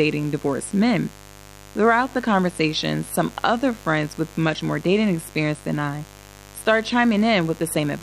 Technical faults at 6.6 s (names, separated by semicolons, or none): mains buzz